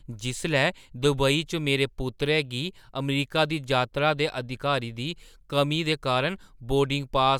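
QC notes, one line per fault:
No faults found.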